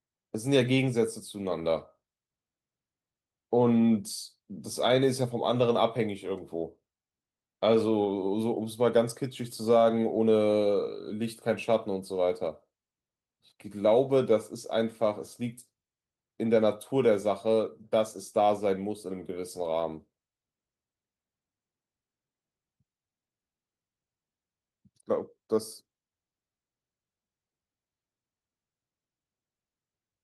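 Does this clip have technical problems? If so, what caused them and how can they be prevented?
No, no technical problems here.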